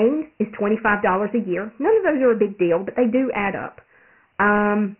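A speech clip carrying Dialogic VOX ADPCM coding from start to finish. The band stops dead at 3 kHz, which points to the 6,000-samples-a-second variant of this telephony format, and the audio sounds as if it runs at about 24 kbps. At 4 bits per sample, the adaptive quantiser's step size keeps lagging the signal, so heavy quantisation noise rides on the speech as a gritty, grainy hiss that rises and falls with it.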